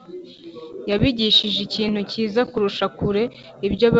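No faults are audible in the speech; the G.722 wideband telephone coding at 64 kbit/s leaves at most a faint trace of its own.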